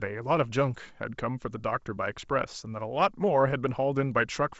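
At 2.23 s, bit errors on an ADPCM link corrupt the G.722 stream at a very low error rate, upsetting the decoder's step size and predictor so the error rings on briefly. It is heard as a short pop with a rough, momentary change in level in the speech.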